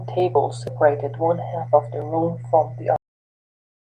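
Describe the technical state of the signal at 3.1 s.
Cut-off end from 2.96 s onward: the final buffers were never written, so the speech stops mid-sound at 2.96 s and 3.1 s sits in abrupt digital silence without decay.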